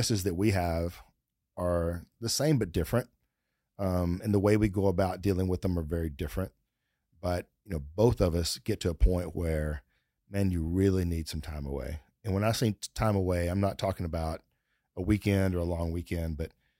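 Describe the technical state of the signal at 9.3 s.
At 9.3 s the signal is intact, with no audible dropout, distortion, clipping or other fault at that point.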